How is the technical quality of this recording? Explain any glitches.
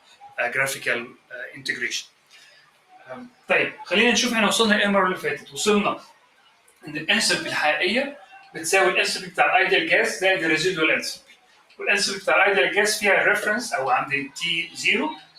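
The technical quality is compromised by a speech-tuned processor working on non-speech material.

Noise suppressor applied to music or sounds, throughout: sustained tones and tails are treated as noise, so the level swings by about 15 dB and the sound pumps and thins.

Sound cut by the noise suppressor, at 0.00–0.39, 1.07–3.86, 5.39–6.87, 8.14–8.56, 11.16–11.81 and 14.28–15.38 s: held or decaying sound is pulled down by up to about 17 dB (about 12 dB at 8.14 s), so it sinks or cuts short.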